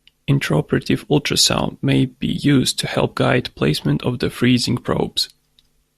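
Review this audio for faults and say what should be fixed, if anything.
No technical faults turn up anywhere in this speech recording. Nothing needs to be fixed.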